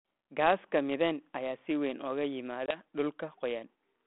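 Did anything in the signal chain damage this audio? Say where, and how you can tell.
Yes, at the network stage: packet loss on an ADPCM call at 2.66 to 2.78 s, just after "ayaa si weyn uga". A 20 ms hole, about one packet, shows as a flat gap in the waveform and a blank vertical stripe on the spectrogram. Speech resumes slightly distorted because the G.726 decoder's predictor and step size lost sync with the sender's. It settles by 2.78 s.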